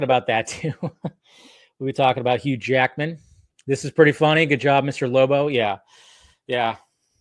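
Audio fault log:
No fault is present in this audio.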